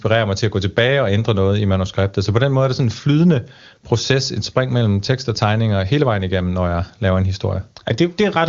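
No technical faults can be heard anywhere in this speech recording. It comes through the AMR wideband (HD Voice) codec, and the audio band stops at about 7.2 kHz, with nothing audible above that.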